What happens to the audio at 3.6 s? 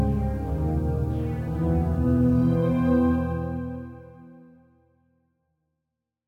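At 3.6 s the audio is intact, with the level easing down smoothly as part of a clean fade-out that runs to the end, with no click or hard edge.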